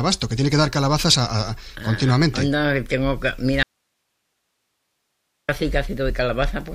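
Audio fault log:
3.63–5.49 s, audio dropout to a faint residue: the sound cuts off abruptly for about 1.86 s, leaving only hiss roughly 55 dB below the signal, then snaps back. The likely cause is the wanted signal being lost while the path downstream stayed live.
6.09 s, compressed frames skipped: the audio jumps ahead by about 20 ms, which fits one missing 23.2 ms frame.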